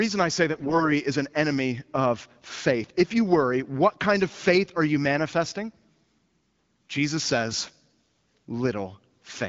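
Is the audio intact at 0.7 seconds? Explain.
No. At 0.7 seconds the speech falls inside a burst of AMR bit errors running from about 0.54 to 0.84 s. Around one in ten of the less protected bits in each frame arrived flipped while the check on the critical bits still passed, so the decoder drove its vocal tract model with misplaced pulses and wrong fine pitch, gain and spectral values. The voice keeps roughly its pitch and loudness but turns hoarse, scratchy and gargly for that stretch.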